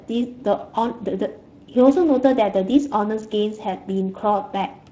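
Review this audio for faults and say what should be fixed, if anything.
The Speex codec damage runs through the whole speech clip and is plainly audible. CELP coding here has too few bits for the excitation, so the speech comes out noisy and hoarse, which fits a rate of around 20 kbps. To prevent it, record or send the speech with a modern codec like Opus, or at least use a higher Speex quality setting.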